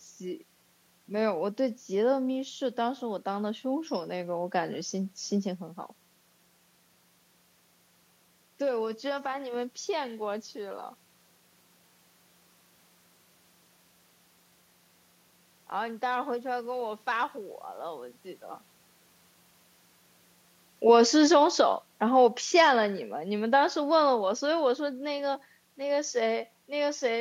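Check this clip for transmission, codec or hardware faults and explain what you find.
One fault is present, an automatic gain fall. From 20.8 to 24.7 s the speech sinks by about 5 dB, with the background noise dropping along with it. The automatic gain control judged the input too loud or its background noise too strong and gradually lowered its gain. Because the room noise falls too, this is a gain change rather than the talker moving, which happens just before, around 20.5 s.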